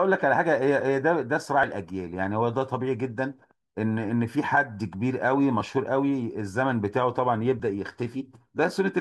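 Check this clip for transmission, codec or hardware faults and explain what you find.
The speech has three short skips, at 1.63 s, 5.61 s and 7.60 s, consistent with audio missing between chunks. Each removes a very brief sliver, around 10 ms, and the material on either side is butted together with no gap. The skips are spaced at multiples of about 2 s apart, which points to the recording likely being handled in 2-second chunks, with a little audio dropped each time one chunk closes and the next opens.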